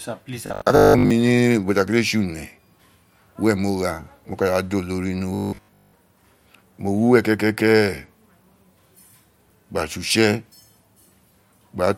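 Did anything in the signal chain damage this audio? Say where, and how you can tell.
Yes. Robotic sound from repeated short buffers hits at 0.47–1.11 s and 5.35–5.93 s. The speech turns into a rigid 50 Hz buzz, over most of the first stretch and all of the second. A starved buffer stage is likely replaying 20 ms blocks while real audio is skipped.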